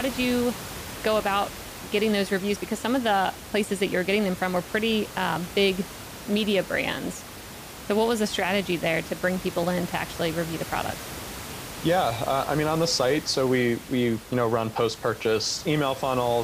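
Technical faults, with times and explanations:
No technical faults can be heard in this speech recording. Room noise sits in the background at about 14 dB below the speech, which is part of the recording itself.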